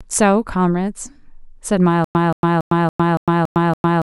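A speech recording breaks down at 2.04 s into a stutter with silent gaps that runs to the end: a 177 ms fragment plays seven times, each followed by about 105 ms of digital silence, repeating every 282 ms. The likely cause is a stalled player or stream replaying its last buffered chunk on each retry, so the speech that should follow is lost. On a waveform this appears as identical blocks separated by flat silent stretches, and on a spectrogram as the same pattern stamped repeatedly between empty columns.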